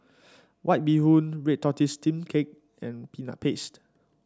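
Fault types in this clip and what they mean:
Listening through the speech, nothing stood out as a technical problem.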